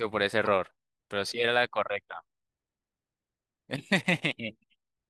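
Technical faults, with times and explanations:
0.45 s, damaged data in a compressed stream: a brief blip of under 20 ms cuts into the speech. A short stretch of the encoded stream arrives corrupted, so the decoder cannot interpret those frames correctly. It either outputs garbage coefficients or discards the frame, loses sync, and scans ahead for the next valid frame header. The result is a short glitch, and decoding resumes normally once sync is regained.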